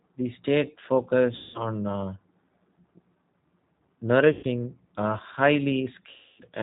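G.729 coding runs through the whole speech clip, and the damage is plainly audible. The speech is rebuilt from a vocal tract filter, a pitch predictor and a few pulses per short frame rather than from the waveform itself, which fits an 8 kbit/s coder. Nothing above 4 kHz survives, so the speech sounds narrow and muffled, with a rough, slightly synthetic texture on every phrase.

VoIP packet loss concealed by the speech codec occurs three times: from 1.36 to 1.67 s, covering 180 ms of lost audio; from 4.33 to 4.45 s, covering 100 ms; and from 6.10 to 6.42 s, covering 280 ms. In each gap the decoder keeps repeating its last pitch and filter settings while lowering the gain. The speech smears into a stretched tone or coloured noise that fades away. The level and clarity then stay weakened for a short time after real audio returns. The longest gap is the one near the end.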